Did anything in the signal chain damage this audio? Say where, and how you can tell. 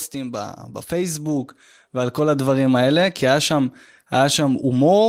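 Yes. Automatic gain rising runs from 0.12 to 2.77 s, a call-processing stage. The gain control judged the speech too quiet and ramped its gain up by about 9 dB over those 2.65 seconds, so voice and background noise swell together.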